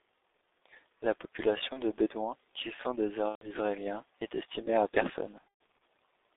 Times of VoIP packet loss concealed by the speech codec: 1.73-1.80, 3.29-3.52, 5.39-5.44

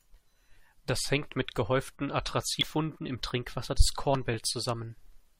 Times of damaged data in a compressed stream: 2.61

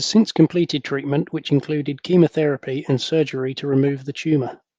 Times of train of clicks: none

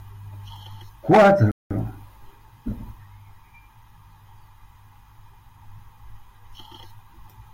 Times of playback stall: 1.51-1.71

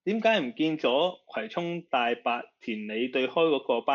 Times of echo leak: none

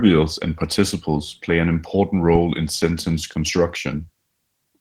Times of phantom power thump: 2.35-2.54

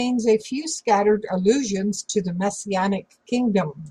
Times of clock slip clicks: none

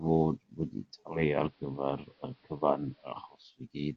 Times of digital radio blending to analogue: 0.99-3.60

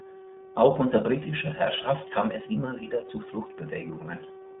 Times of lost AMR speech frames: none

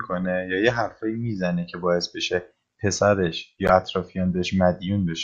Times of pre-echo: none

